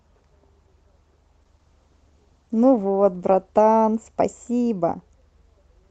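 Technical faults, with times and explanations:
1.42 to 5.07 s, call bitrate drop: the speech turns coarse, watery and duller than the Opus-like call audio before it, which fits the encoder being cut from about 32 to 12 kbps. It spends 1.93 s at its roughest before the detail returns.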